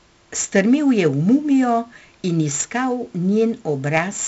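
From start to finish the speech carries the gritty, level-following hiss of 4-bit ADPCM compression, and the damage is heavy. Each sample is coded as a coarse 4-bit step from a prediction, so the error rises with every loud syllable and smears consonant attacks where the step size lags. Nothing reaches above 7.7 kHz, which points to a 64 kbps stream at a low sample rate. A spectrogram shows a hard ceiling there and a grainy noise floor that tracks the speech energy.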